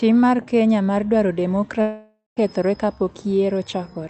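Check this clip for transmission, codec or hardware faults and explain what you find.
One transmission fault is audible in the speech: a long network dropout from 1.81 to 2.39 s, roughly 0.56 s long. At 1.81 s the sound turns into a buzzy continuation of the preceding audio that fades out, leaving about 150 ms of silence before the speech resumes at 2.39 s with that stretch missing. The likely cause is that packets stopped arriving and the receiver filled the gap by extending the last decoded audio until it ran out. The call path's Opus coding is also heard as a top end limited to about 8 kHz, consistent with a moderate call bitrate near 32 kbps.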